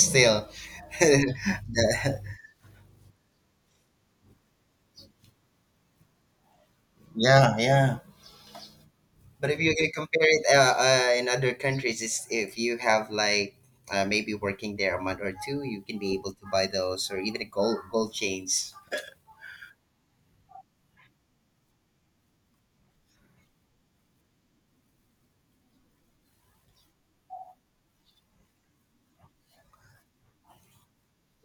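Nothing is technically wrong with this recording of speech.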